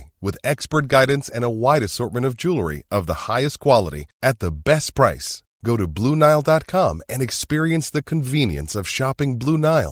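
No technical faults can be heard in this speech.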